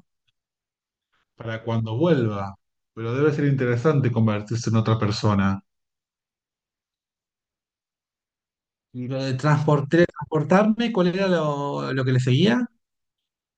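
From 0.0 to 9.08 s, wrong sample rate: 48 kHz audio played at 44.1 kHz runs at 0.919 speed, about 1.5 semitones low, with pitch and tempo shifting together, unlike pitch-shifting.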